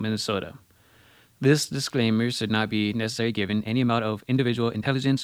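From start to finish the speech sits on a constant, even hiss, the mark of low bit depth with dither. The level points to roughly 10-bit resolution, with noise added before rounding so the error becomes steady white noise around 40 dB below the signal rather than distortion.

At 3.02 s, right after "disclaimer should not be", a time-stretched section runs to the end. Pace jumps to about 1.35 times normal while pitch holds, so the speech turns rushed, likely from software squeezing the audio by dropping short pieces.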